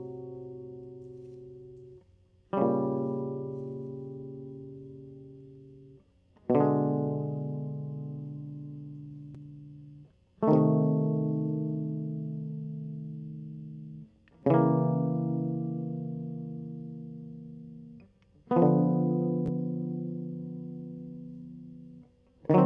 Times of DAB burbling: none

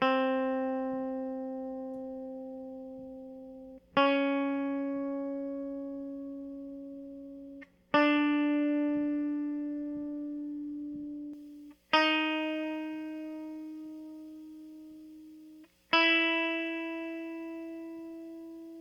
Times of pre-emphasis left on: 11.33-18.81

